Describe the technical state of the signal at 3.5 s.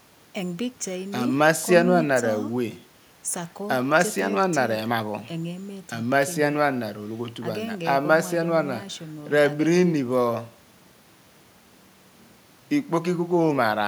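At 3.5 s the speech signal is intact, with no technical fault audible at that moment.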